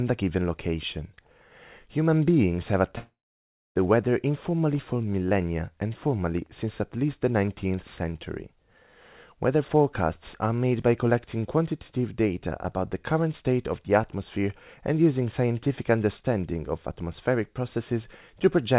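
A long network dropout runs from 2.98 to 3.77 s. The speech breaks into a fading, buzzy continuation of the last sound, then 0.61 s of silence. It returns with 0.78 s of audio missing, likely because packets stopped arriving over the call link.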